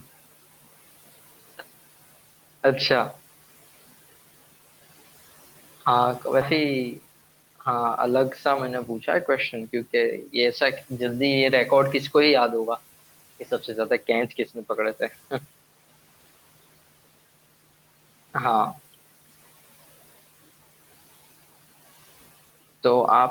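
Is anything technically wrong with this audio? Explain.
Yes, there are three faults in this speech.

At 6.41 to 6.43 s there is a skip ahead. Around 0.4 s of audio was discarded while later audio was already waiting, and playback jumps forward with no filler. A spectrogram shows an abrupt vertical seam where unrelated speech spectra meet; the waveform splices directly.

From 6.57 to 7.78 s a jitter buffer speed-up follows. With extra audio queued, the receiver repeatedly trimmed pitch-period-sized pieces, roughly 0.15 s in total, so speech runs about 11% faster at unchanged pitch and sounds rushed. Harmonic spacing stays constant while syllables compress in time.

Between 14.29 and 14.57 s there is speech cut by the noise suppressor. It mistook part of the speech for noise and attenuated it by up to about 13 dB, leaving sounds swallowed and faint. The spectrogram shows a brief dimmed patch sinking toward the room noise floor, which sits about 21 dB below speech.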